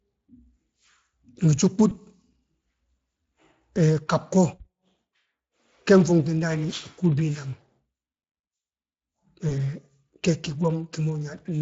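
Throughout, the speech sounds hoarse and grainy with a noisy edge, plainly audible Speex codec damage, which fits a Speex stream coding at roughly 20 kbps.

From 1.89 to 1.93 s and again from 9.49 to 9.57 s, the speech smears into a brief buzzy or noisy sound that fades. This is VoIP packet loss concealed by the speech codec: the decoder filled what sounds like a single lost 20 ms packet by extending its last pitch and filter.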